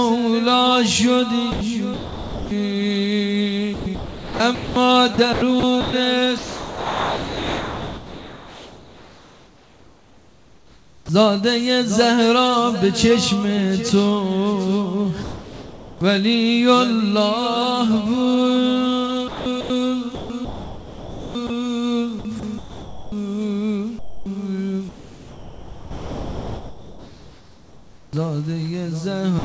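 Sound chopped by the voice detector at 1.5–2.5 s and 3.7–11.1 s: the detector likely toggled transmission repeatedly, so fragments become comfort noise. Sound dropped by the voice detector at 15.2–16.0 s: the detector likely misread quiet sound as background and stopped sending, so the sound gives way to steady comfort noise. Chopping returns at 19.3–21.5 s and 22.2–23.1 s, again likely from the detector switching back and forth. Further drops at 24.0–24.3 s, 24.9–28.1 s and from 29.39 s to the end likely come from the same misjudgement, with the longest replacing about 1.7 s of sound. All of this sits over a G.722 call path with nothing above 8 kHz.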